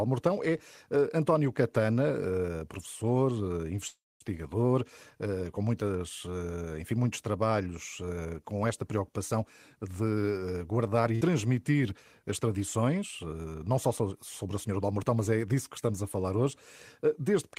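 At 3.87 s the speech stalls until 4.25 s: a brief held sound fades into about 220 ms of silence, then it picks up exactly where it stopped. That's a call audio freeze, likely packets stuck in transit draining the jitter buffer, adding roughly a third of a second of delay without losing anything.

From 8.94 to 9.89 s the speech runs about 5% fast at the same pitch. That's jitter buffer speed-up, with the receiver snipping out tiny pitch-period slices, around 50 ms in total, to trim excess buffered delay.

At 11.15 s there's a burst of packet loss: about 54 ms of fading held sound fills the gap, then the speech resumes with about 60 ms of the original gone.

Speed-up returns from 14.68 to 15.17 s, this time about 10% fast, again shedding roughly 50 ms, so it sounds noticeably hurried.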